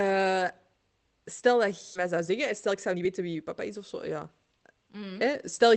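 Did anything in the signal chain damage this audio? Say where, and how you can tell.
Yes. At 1.95 to 1.97 s the network and jitter-buffer stage produced a skip ahead. Roughly seven-tenths of a second of audio was discarded while later packets were already queued, and playback jumps straight across the gap with nothing filled in. On a waveform the envelope changes abruptly, with no silence or fade. On a spectrogram the harmonic contours break off and restart at unrelated positions, like a hard splice.

The same buffer then applied a jitter buffer speed-up, from 2.05 to 3.78 s at about 113% and from 4.19 to 5.03 s at about 111%. It removed short pitch-period-sized slices over and over to reduce its excess delay, cutting roughly a fifth and then a tenth of a second in total. Pitch holds steady but the pace sounds hurried. A spectrogram shows syllables compressed in time with unchanged harmonic spacing, and the waveform shows tiny, repeated period-length discontinuities. 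These cuts pass through an Opus call path whose audio band stops near 8 kHz.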